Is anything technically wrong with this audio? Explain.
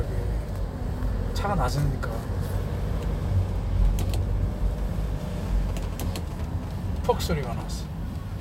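Yes, GSM signalling bursts intrude from 5.45 to 6.65 s. A nearby 2G phone's radio bursts, rectified by the audio circuitry, produce a galloping dit-dit-dit of short 217 Hz buzzes roughly 15 dB below the sound.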